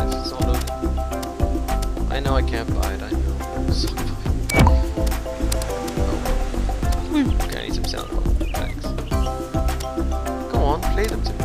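There are no technical faults to describe in this audio.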